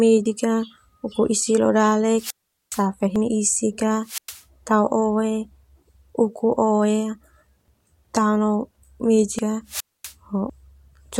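Speech with two recurring faults. At 0.26, 2.30, 3.16, 7.68, 9.39 and 10.50 s the sound jumps abruptly, skipping roughly a tenth of a second. These skips are likely dropped buffers from an overrun, where audio was overwritten before it could be read and the two edges were spliced together. A waveform shows a sudden discontinuity with no gap. A spectrogram shows a thin vertical broadband line where the spectral patterns fail to line up. The wireless microphone squelch dropouts fall at 2.15–2.85 s, just after "isik leo", at 4.02–4.43 s and at 9.67–10.14 s. In each, hiss swells as the FM signal fades, then the receiver mutes for about 0.45, 0.11 and 0.24 s respectively before the speech returns. On a spectrogram, each appears as a wash of broadband noise, then a blank band, then the speech coming back. On a waveform, it appears as a flat stretch of near silence.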